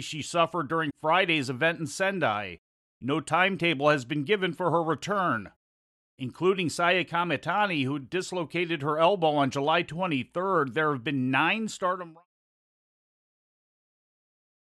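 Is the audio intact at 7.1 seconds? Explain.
Yes, the speech at 7.1 seconds is intact, with no dropout, click or distortion at that moment.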